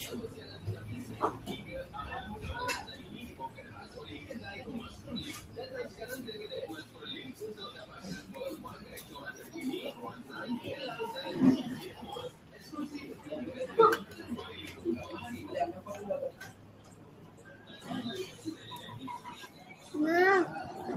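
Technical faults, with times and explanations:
Throughout, noise suppressor applied to music or sounds: a speech-tuned suppressor is still switched on, so it keeps treating steady, sustained parts of the audio as noise. The level swings by around 10 dB as it grabs and releases, which gives a pumping, thinned-out feel.
0.28–0.84 s, 1.06–1.21 s, 1.6–1.94 s, 2.96–3.96 s, 6.84–7.02 s, 12.31–12.67 s, 16.32–17.71 s, 19.48–19.83 s, sound cut by the noise suppressor: in each of these stretches the suppressor decides the held or fading material is noise and pulls it down by about 5 to 7 dB. The longest and deepest is 16.32–17.71 s, at about 7 dB. Sustains sink and tails get clipped short, while sharper onsets mostly make it through.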